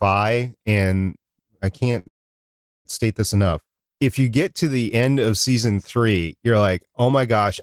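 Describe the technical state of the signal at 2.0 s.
At 2.0 s the speech hangs on a held, faintly buzzing sound. This is a short stall from a late packet, running from 1.99 to 2.08 s, just after a similar 17 ms hold at 1.91 to 1.95 s. A packet arrived late and the jitter buffer ran dry, so the receiver stretched the last sound for 67 ms and then resumed where it left off. Nothing is lost, but the timing slips.

Straight after, from 2.08 to 2.87 s, the audio goes almost entirely silent for about 750 ms: a call audio freeze. Packets were likely held up in transit, so the receiver briefly carried the last sound and then fell quiet. It picks up again without loss, but after a 773 ms gap.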